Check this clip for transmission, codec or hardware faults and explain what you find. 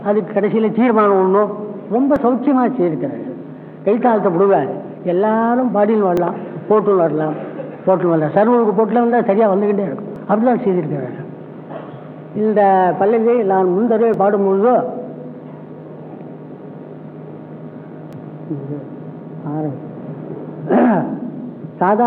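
One transmission fault recurs: overlap between stream segments, at 2.16, 6.17, 10.16, 14.14 and 18.13 s. Overlapping time stamps make the player discard a few milliseconds, producing brief skips every 4 s; waveforms show abrupt discontinuities.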